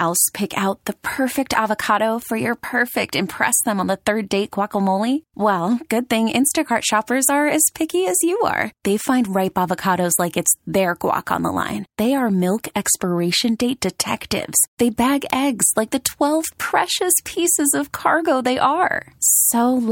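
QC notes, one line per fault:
2.22, 15.30, 16.05 and 19.27 s, bit error spike: isolated sharp broadband ticks, peaking at about −14, −2, −8 and −2 dBFS, each from a single flipped bit spiking one sample (three at 2.22 s).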